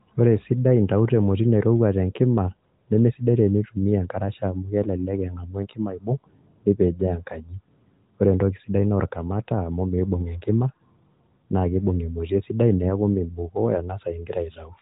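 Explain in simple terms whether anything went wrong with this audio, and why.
Nothing went wrong here; the recording has no faults.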